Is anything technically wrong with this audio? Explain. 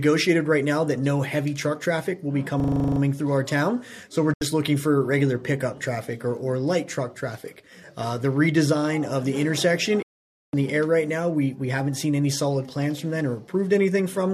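Yes, there are two kinds of fault.

System hang loop, 2.6 to 3.0 s. The playback system froze while the audio hardware kept replaying the same stretch of its ring buffer, so one 40 ms piece of sound repeats about ten times at 25 Hz, pointing to a buffer of roughly that length. The result is a rattling, buzzy stutter rather than the sound moving forward, with little or nothing skipped when normal playback resumes.

Digital broadcast dropout, at 4.34 to 4.42 s and again at 10.02 to 10.54 s. The receiver lost valid frames and muted until good data returned, fading out over about 3 ms each time. The first hole is 72 ms, which fits about three lost frames of 24 ms. The second is 504 ms, which fits about twenty-one frames. Both are abrupt silences, and the sound resumes further along with the missing material gone.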